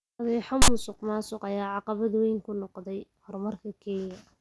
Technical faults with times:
0.62-0.68 file tags played as audio

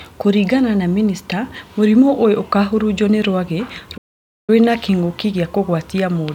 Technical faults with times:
3.97-4.50 playback stall

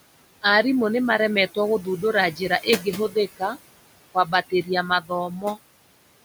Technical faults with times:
0.00-6.25 noise suppressor artifacts
2.36-2.87 speech cut by the noise suppressor
4.14-5.58 speech cut by the noise suppressor

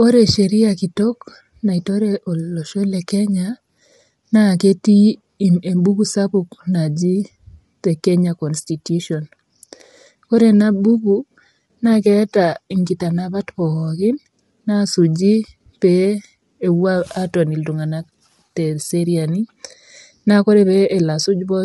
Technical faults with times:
0.00-21.64 low-delay AAC compression

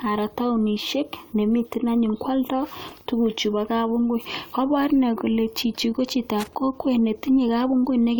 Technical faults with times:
2.88-3.01 loose connector crackle
6.40-6.55 loose connector crackle

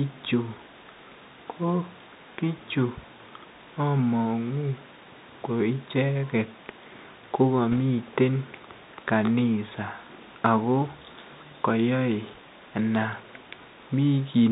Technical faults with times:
0.00-14.51 Bluetooth CVSD headset codec
7.72-7.79 bit errors on a Bluetooth voice link

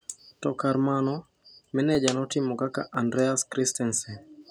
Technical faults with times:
1.95-3.94 periodic USB or driver dropouts

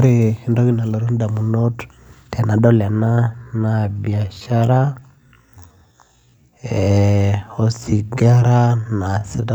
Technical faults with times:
3.08-9.55 time-stretched section

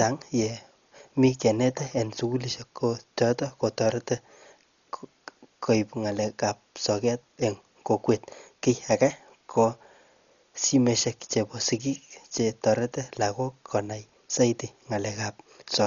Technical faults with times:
0.00-15.86 Dolby Digital compression

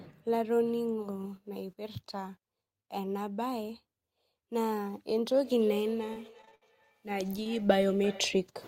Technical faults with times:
5.35-8.55 feedback echo between two devices
6.13-6.63 repeated packet loss (robotic sound)
7.43-7.47 short concealed packet loss

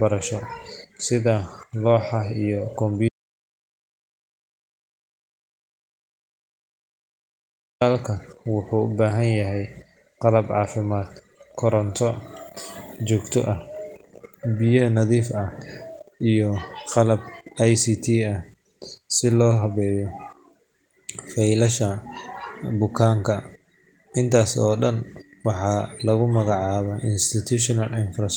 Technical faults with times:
3.09-7.81 audio dropout to silence

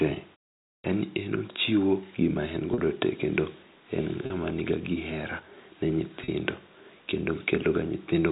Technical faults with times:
0.78-0.84 clipped start after a pause
2.74-2.78 packet loss with pitch repetition
4.26-4.30 packet loss with pitch repetition
6.24-6.28 packet loss with pitch repetition

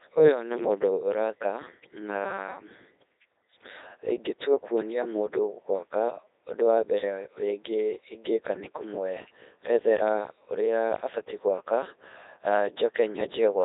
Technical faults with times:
0.00-13.64 Codec 2 vocoder

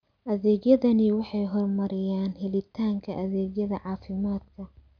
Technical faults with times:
none

